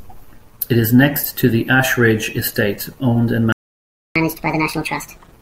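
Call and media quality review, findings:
Playback stall, 3.52 to 4.16 s: speech cuts out mid-flow right after "owned and", dead silence for about 0.63 s, then resumes where it left off. Likely a player buffer underrun or blocked audio thread starving output.

Catch-up at higher speed, 4.16 to 5.32 s: straight after the gap, speech runs at 1.5x, pitch up roughly seven semitones, chipmunky. Player resampling its backlog to recover lost time, then dropping back to normal rate.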